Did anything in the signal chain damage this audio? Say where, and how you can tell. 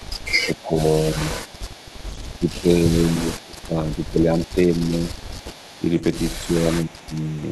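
Yes, at the call-processing stage. Echo leak: a faint copy of the speech trails it by 302 ms, roughly 25 dB down, at 0.00–0.77, 1.44–2.41, 3.39–5.84 and 6.92–7.5 s (nearer 30 dB at the end). A far-end echo canceller likely let its loudspeaker pickup through.

Speech suppressed in double talk: the main talker dips by roughly 15 to 20 dB in pieces at 0.46–1.6, 2.38–4.71 and 5.79–7.17 s, overlapping the echoed stretches. The canceller likely confused near speech with echo while both sides were active and attenuated everything.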